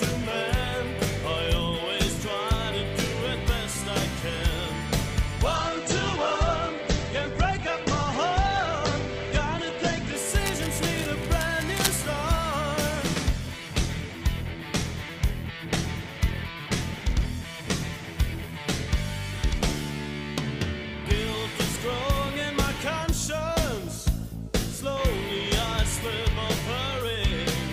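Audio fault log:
5.56–10.23 s, call bitrate drop: the encoder falls from 48 to 10 kbps, holding its lowest rate for 4.6 s, so coding turns coarse and watery and bandwidth shrinks from 20 kHz to 8 kHz. A spectrogram shows everything above 8 kHz vanishing.
10.46–12.05 s, cable scratch noise: dense, irregular crackling and rustling rides over the sound, only somewhat quieter than it, likely from a worn cable or connector being moved. The waveform shows jagged, uneven bursts, and the spectrogram shows ragged broadband streaks.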